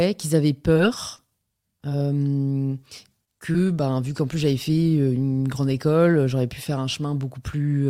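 A speech recording with two stretches of packet loss. From 0.73 to 2.07 s, just after "qu'ils avaient", scattered short gaps occur: about five small holes, the longest around 30 ms, each patched by extending the preceding sound. The audio stays clear apart from brief ticks and smears. On a spectrogram these show as narrow smeared columns where the harmonics freeze for an instant. From 3.25 to 3.56 s, right before "ben vu qu'en plus", repeated packet loss gives a choppy texture with pieces missing. Three gaps, the longest 19 ms, are concealed in quick succession, filling 52 ms and about 17% of that span. The waveform shows repeated, copied-looking cycles with small discontinuities at their edges.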